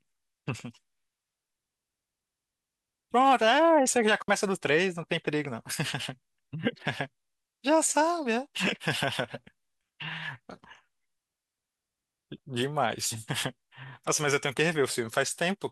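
At 4.22 s the speech drops out for 60 ms, ending at 4.28 s: a digital wireless dropout, where the receiver lost too much data and muted with a very short fade. Unlike an analogue dropout, the gap is clean near silence, with no hiss or noise burst on either side.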